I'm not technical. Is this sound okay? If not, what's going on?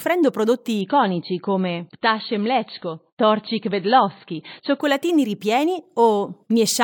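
No. From 0.81 to 4.81 s the speech suddenly turns dull and watery, with nothing above 4.5 kHz, then snaps back. That's an adaptive stream at a lower bitrate. The stream switched to a poorer copy, likely because the connection slowed. Unlike a dropout, the sound never stops.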